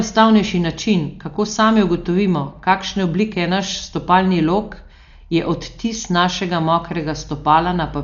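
Throughout the speech, the band stops at 6.9 kHz and the tone is dull, with rough, fluttering noise around voiced tones. This is likely heavy Dolby Digital compression, consistent with a 48 kbps encode, where starved frequency lines are filled with dither noise.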